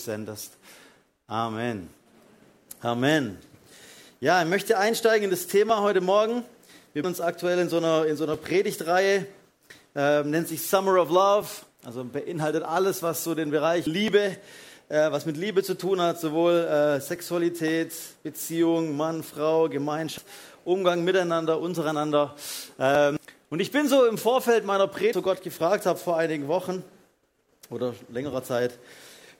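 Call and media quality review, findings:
Regular click or pop, repeating every 3.07 s from 2.61 s to 28.33 s, about ten in all. Likely clock drift buffer slips: two devices on independent clocks, mismatched by roughly a tenth of a percent. The buffer between them fills or drains until a block of roughly 150 samples is dropped or repeated, then the cycle restarts.

Short chirp or blip at 7.04 s, 13.87 s, 20.18 s, 23.17 s and 25.13 s. Damaged data in a compressed stream: corrupted bytes in the encoded stream at these points. The decoder misreads the affected frames, loses sync, and skips forward to the next valid frame header.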